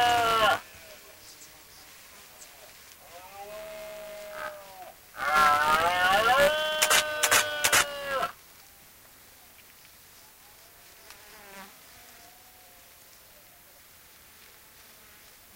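A recording of everyday sounds carrying buffer tearing throughout: a steady robotic buzz at 200 Hz rides on everything audible. Writer and playback pointer have drifted into overlap, so a small slice of each period, around a twentieth, replays audio roughly 15 ms stale between hard splices.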